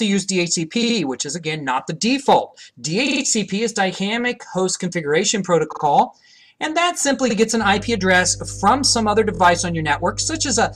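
Repeated frames first appear at 0.82 s. A 70 ms stretch of sound plays three times in a row. The decoder received the same compressed data more than once. It sounds like a short stutter. More repeated frames follow at 3.07 s, 5.71 s and 7.29 s. These use a shorter 46 ms block, which fits two frames. It plays four, three and two times.

Mains hum starts at 7.59 s and runs to the end. A steady 50 Hz tone sits under the audio. Low harmonics come with it. It sits roughly 15 dB below the signal. A ground loop or a nearby transformer is coupling the power line into the signal path.

One last set of repeated frames comes at 9.34 s, under the hum. A 23 ms block, about one frame, plays three times. It is heard as a brief stutter.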